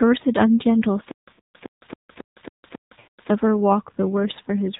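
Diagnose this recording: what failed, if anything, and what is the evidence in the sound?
AMR narrowband mobile codec, throughout: nothing passes above 4 kHz, and the speech sounds plainly buzzy and synthetic. That fits a low AMR-NB mode near 7.4 kbps modelling the vocal tract from sparse pulses.

Stutter with silent gaps, 1.11 to 3.30 s: a 110 ms burst repeats eight times, each followed by 162 ms of digital silence, every 273 ms. The likely cause is a playback or stream buffer stall replaying its last fragment.

Lost AMR speech frames, 1.34 to 1.39 s and 3.00 to 3.08 s: the sound smears and fades for about 40 ms, then about 80 ms, which fits two and four dropped 20 ms frames. The decoder concealed them by repeating the previous parameters at decaying gain.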